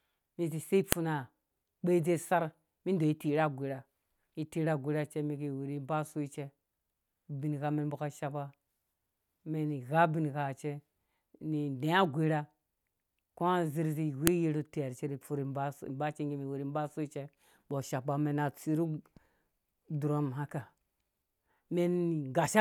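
Sharp, loud clicks snap out of the speech at 0.92 s and 14.27 s, each far shorter than 20 ms. This is a file header played as audio: separately stored pieces were joined without stripping their WAV headers, so those bytes sound as a brief burst.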